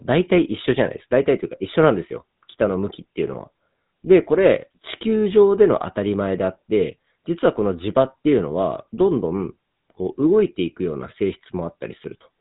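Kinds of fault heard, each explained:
GSM full-rate codec: The speech has a plainly audible buzzy, gravelly roughness and a dull top with nothing above 3.8 kHz. This fits 13 kbit/s GSM full rate, which models the vocal tract and drives it with sparse, regularly spaced pulses.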